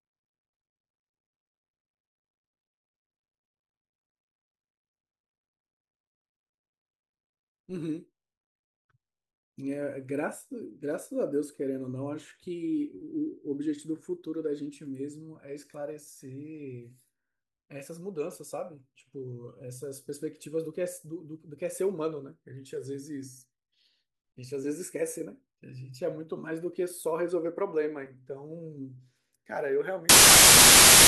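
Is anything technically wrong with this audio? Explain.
Yes. From 30.09 s to the end at 31.07 s, the speech gives way to samples built from the wrong bytes. The bytes of each sample are assembled misaligned or in swapped order, so rapidly changing low bits dominate, producing loud, harsh broadband noise.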